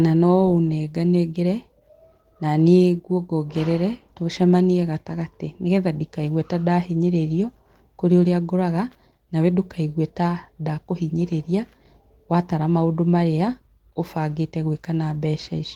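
No faults can be heard anywhere in this speech.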